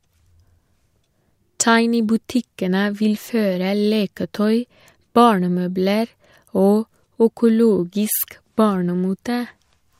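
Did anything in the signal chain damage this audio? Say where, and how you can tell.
No, nothing in the chain seems to have damaged this speech recording, and there's nothing to point to at any stage along the way.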